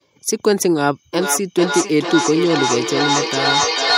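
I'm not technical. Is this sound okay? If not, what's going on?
No. Feedback echo between two devices starts at 1.13 s and runs to the end. A second device replays the speech into a nearby microphone, so it returns about every half second, nearly as loud as the original.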